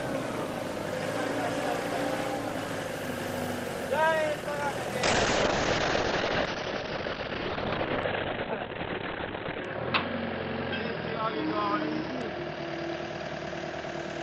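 From 5.04 s to the end, the sound turns rough and muffled, with everything above 4 kHz gone, where it had reached 20 kHz before. This is a call bitrate drop: the encoder fell from 32 kbps to 8 kbps, bottoming out for 4.56 s.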